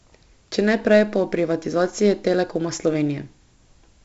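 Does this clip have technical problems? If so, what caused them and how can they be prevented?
Yes. The speech carries heavy 4-bit ADPCM compression damage throughout: a gritty hiss that rides on every loud stretch, grainy edges on sharp attacks, and nothing above 7.8 kHz. That fits a 64 kbps stream where each sample is coded as a coarse step from a prediction. Prevent it by recording and exporting to PCM or a modern codec instead.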